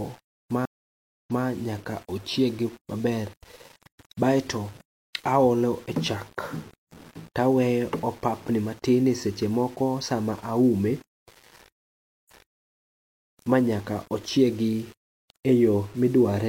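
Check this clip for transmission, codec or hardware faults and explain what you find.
Two faults are present: a grainy, signal-dependent distortion across the whole speech clip, and two stream reconnects.

Throughout, the speech carries a rough, grainy distortion that rises and falls with the voice, sitting roughly 30 dB below the signal. Quiet passages and decays sound gritty rather than hissy, because the error tracks the waveform instead of forming a steady noise floor. The likely cause is low bit depth without dither: samples rounded to a coarse grid, which fits about 7 bits. Without dither, the rounding error stays correlated with the signal and is heard as distortion rather than as benign noise.

The first stream reconnect runs from 0.65 to 1.45 s. The audio cuts to silence for 472 ms, then resumes with "nyaka ochiegi", but from a point 325 ms earlier than where it stopped, so a short stretch is heard twice. 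This happens when the connection drops, the player reconnects and a fresh decoder starts on a burst the server resends from slightly behind the break.

The second stream reconnect, from 11.85 to 12.60 s, follows the same pattern: 417 ms of silence, then playback resumes 325 ms earlier, repeating the material just before the gap. The identical rewind points to the same server-side resend after the link is re-established.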